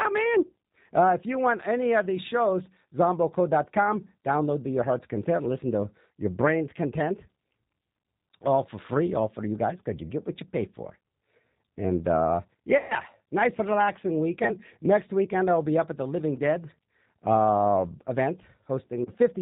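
Right through, the speech has that rough, slightly synthetic G.729 codec sound: 8 kbit/s, rebuilt from a vocal model, nothing above 4 kHz. Packet loss concealed by the speech codec hits at 12.78–12.95 s, a gap of about 120 ms just before "nice relaxing", then 14.44–14.56 s right after it, and 19.05–19.12 s. Each time the decoder stretches its last sound into a buzzy tone or coloured noise that fades.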